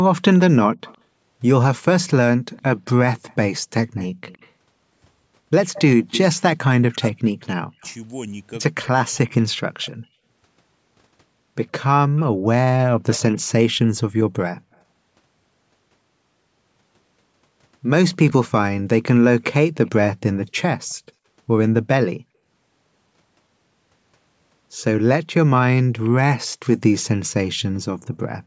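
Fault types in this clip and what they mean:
Echo leak: a faint copy of the speech trailing it by 113 ms, likely from a loudspeaker whose echo canceller let some pickup through. It sits about 15 to 35 dB down, strongest from 2.56 to 6.18 s, a single discrete repeat rather than reverb's smooth decay.
Speech suppressed in double talk: from 6.75 to 10.18 s the speech dips in pieces, roughly 40 dB at deepest and about two seconds in total, likely an echo canceller mistaking overlapping talk for echo. Unlike random dropouts, these cuts coincide with that overlap.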